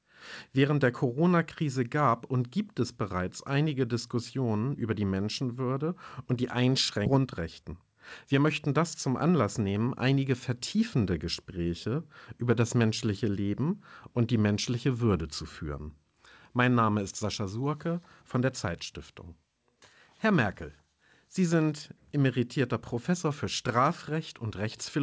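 Skip ahead, 7.06 to 7.08 s: right after "und die", the speech jumps forward with no gap filled in. Something like 0.7 s of audio never reaches playback. It was discarded in transit or thrown out when the jitter buffer overflowed, while later audio was already queued behind it. The two sides of the cut are butted together almost directly, so the sentence lurches abruptly from one point to a later one.

Jitter buffer speed-up, 7.18 to 10.17 s: immediately after the jump, the receiver is still holding more audio than its target, the kind of backlog left when delayed packets arrive in a burst. To drain it, it repeatedly snips out short pieces one or a few pitch periods long, removing around 0.3 s in total. Over these three seconds the speech runs at 108% speed with unchanged pitch and sounds hurried. Throughout, the band stops at 8 kHz, which fits a G.722 call codec.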